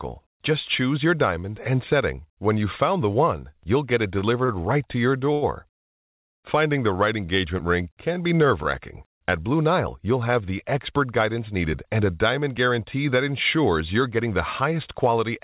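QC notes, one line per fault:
4.19 s, 4.45 s and 5.33 s: short stall from a late packet, the first two just after "one you'll get it". Each time a packet arrived late, so the receiver held the last sound for about 20, 30 and 90 ms and then resumed with nothing lost. On a spectrogram the harmonics run flat and smeared across each hold, with a slight dip in the waveform envelope.
5.81 to 6.39 s: call audio freeze. The audio stops for about 0.55 s and goes fully silent, then carries on from where it stopped with nothing missing, likely because packets were held up and the jitter buffer ran empty. The waveform shows a flat gap, the spectrogram a blank vertical band.
11.55 to 13.58 s, after "have the expert guidance", and 14.02 to 15.31 s: jitter buffer speed-up. The receiver trimmed short pitch-period slices again and again to cut excess buffered delay, so speech runs about 7% faster at unchanged pitch and sounds hurried, with roughly 150 ms and 100 ms removed. 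Spectrogram syllables look compressed in time, harmonic spacing unchanged.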